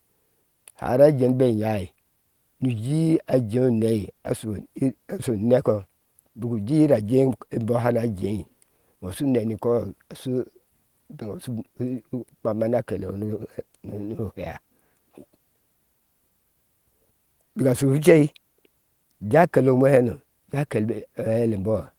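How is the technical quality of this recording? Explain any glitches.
No technical problems are audible in this recording.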